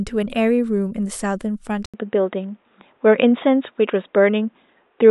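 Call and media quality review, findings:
Speech turns dull and band-limited from 1.86 s to end, after an 80 ms dropout at the switch. Nothing above 3.8 kHz, level shifts a few dB, new background hiss well under the speech. Likely input switched to a poorer device.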